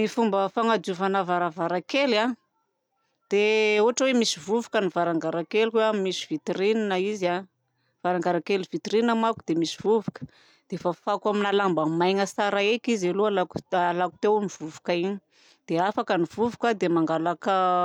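Nothing goes wrong anywhere in this stretch of speech, so there's no fault to point to at any moment.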